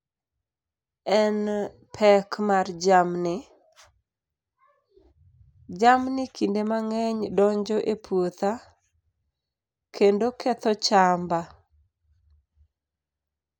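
No technical faults are audible anywhere in this speech recording.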